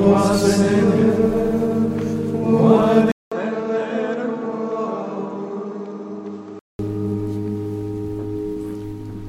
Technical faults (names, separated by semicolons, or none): input switched to a poorer device